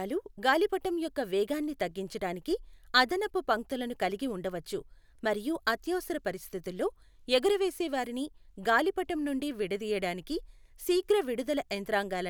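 Nothing goes wrong anywhere in this stretch of speech, so there's no technical fault to point out.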